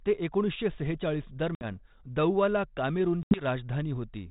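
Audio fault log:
1.55 to 1.75 s and 3.23 to 3.44 s, packet loss on an ADPCM call: hard-edged silent holes of about 60 ms and 80 ms, each roughly several packets. The decoder's predictor and step size drift from the sender's, so speech resumes with brief, slight distortion, settling within tens of milliseconds, over the 32 kbit/s G.726 telephone-band path.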